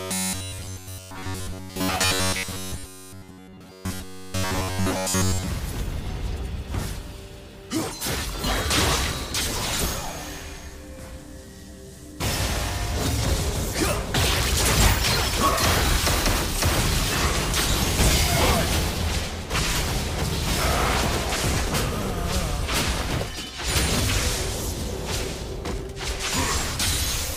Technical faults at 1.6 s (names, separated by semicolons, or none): robotic sound from repeated short buffers